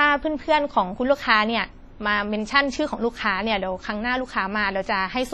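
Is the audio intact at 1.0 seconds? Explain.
No. Heavy WMA compression runs through the whole speech clip, including 1.0 s. Long transform blocks, likely from an encoder at around 32 kbps, smear quantisation noise into a ringing, washy hiss that breathes with the signal, unlike steady background noise.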